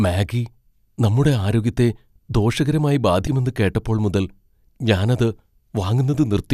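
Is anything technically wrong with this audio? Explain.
Yes. Compressed frames skipped at 3.27 s: a few whole frames of the coded speech never reach the output, so the audio jumps ahead by around 70 ms, roughly three 24 ms frames.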